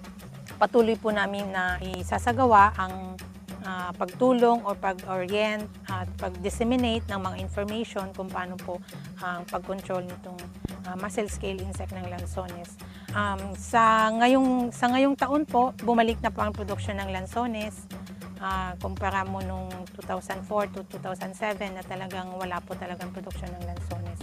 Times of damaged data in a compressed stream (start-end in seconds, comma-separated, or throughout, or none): none